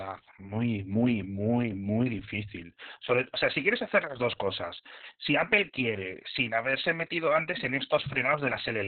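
Opus voice compression runs throughout. The narrowband SILK coding keeps only the band below 4 kHz. The speech sounds muffled, hoarse and robotic, which fits a bitrate near 6 kbps.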